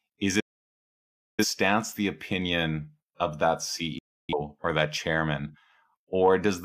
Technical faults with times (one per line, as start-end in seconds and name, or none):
0.40-1.44 digital broadcast dropout
3.98-4.34 digital broadcast dropout